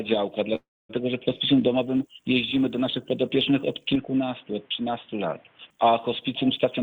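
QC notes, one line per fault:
0.55–0.91 s, call audio freeze: sound stalls and fades to silence for about 250 ms, likely held-up packets emptying the jitter buffer; playback resumes where it stopped, adding roughly 340 ms of delay.
3.95–5.70 s, input switched to a poorer device: sound turns dull with nothing above 3.8 kHz, level drops a few dB and new background noise appears, pointing likely to a narrower-band microphone.
6.65–6.82 s, jitter buffer speed-up: sound runs at about 136% speed at unchanged pitch, as short pitch-period pieces totalling around 70 ms are cut to reduce buffered delay.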